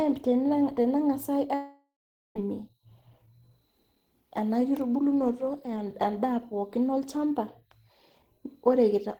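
At 1.54 s the speech cuts out until 2.36 s. The last sound carries on as a fading buzz, then 0.44 s of near-silence follows. This is likely a long network dropout. No audio arrived, so the receiver stretched what it had. When the speech resumes, the missing 0.81 s is simply gone.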